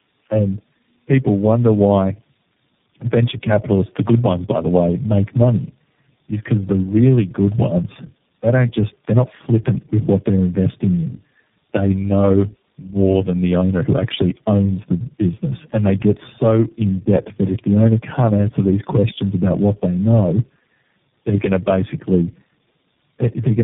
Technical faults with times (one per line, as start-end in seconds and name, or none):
0.00-23.63 tandem speech coding